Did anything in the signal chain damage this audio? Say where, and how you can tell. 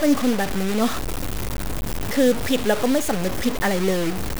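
Yes. Throughout the speech, the audio carries a coarse, grainy distortion that tracks the signal. Quiet passages turn gritty, and the softest moments sputter or drop out instead of fading smoothly. The error sits roughly ten decibels below the signal, and the level moves in visibly large steps, which fits about 4 bits with plain truncation and no dither. The damage likely happened at a sample-format conversion stage, where the word length was cut without dither, so the error stays correlated with the signal.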